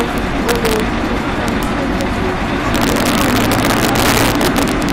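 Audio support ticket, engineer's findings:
Integer overflow, throughout. Loud peaks crack violently, harsher than clipping. Gain stage likely pushes the sum about 5 dB past full scale without saturation; around one percent of samples wrap to opposite sign, each flipping across the full range.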